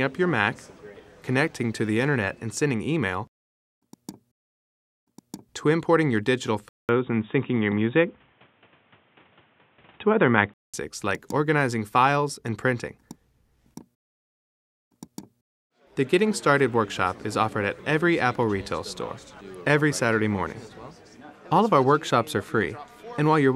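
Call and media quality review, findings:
Band narrows and tone goes boxy, 6.69–10.74 s. Likely input switched to a poorer device: capture path moves to a lower-grade mic or headset call profile. Nothing above 3.8 kHz in that span. 200 ms dropout at the switch. Level shifts by a few dB. New, different noise floor sits well below the signal. Full band returns at 10.74 s.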